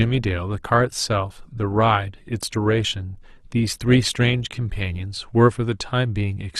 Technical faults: adaptive stream starting at a low bitrate

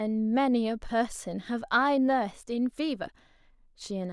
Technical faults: none

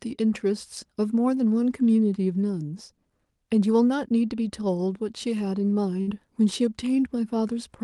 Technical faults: burst of packet loss; short concealed packet loss

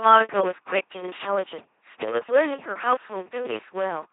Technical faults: filter restarted on every block; LPC-10 vocoder

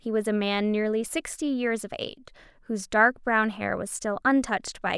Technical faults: none

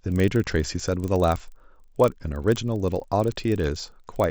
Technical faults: resampler restarted on every block

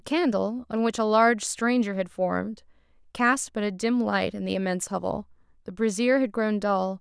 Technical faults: none

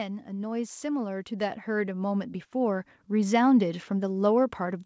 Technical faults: automatic gain rising

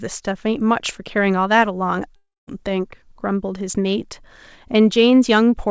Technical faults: long network dropout

